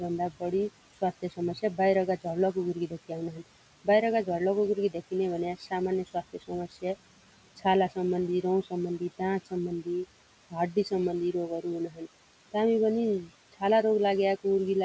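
Noise suppressor artifacts run through the whole clip. The room noise is pulled down by about 18 dB.

From 0.3 to 12.55 s there is speech cut by the noise suppressor. About three seconds of soft speech sounds are treated as noise and dropped by up to about 19 dB. They sound swallowed. The same happens briefly from 13.24 to 13.62 s, with drops near 16 dB.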